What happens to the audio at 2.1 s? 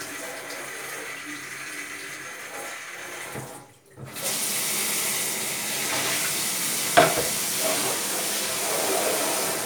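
Nothing goes wrong at 2.1 s: the sound carries on cleanly through that moment, with no dropout, click, distortion or other fault.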